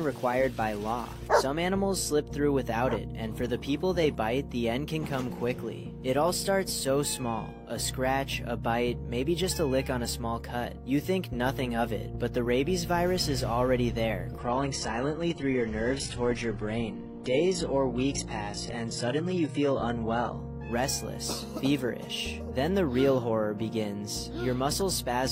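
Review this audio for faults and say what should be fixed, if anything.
From 14.38 to 20.38 s you get an adaptive stream at a lower bitrate: treble suddenly vanishes above 11.1 kHz and artefacts thicken, fitting a very low-bitrate HE-AAC rendition. Prevent it by giving the player more buffer headroom or capping how far it's allowed to step down.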